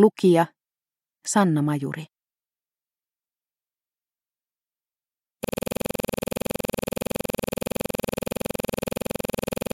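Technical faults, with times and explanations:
5.44 s to end: system hang loop. A 46 ms slice repeats about 90 times until the clip ends. That fits a 2048-sample buffer replayed after the system froze. The exact repetition at 21.5 Hz gives a rapid, rattling buzz.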